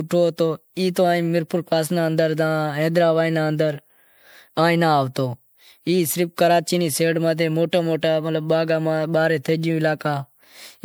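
From start to end the speech sounds swirly, smeared and hollow, with blurred consonant attacks. The likely cause is generation loss: repeated MP3 re-encoding, perhaps about five passes at 128 kbit/s, each requantising on a shifted frame grid so artefacts accumulate.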